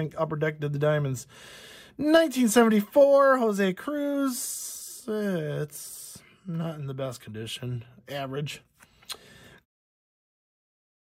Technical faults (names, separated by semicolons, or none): none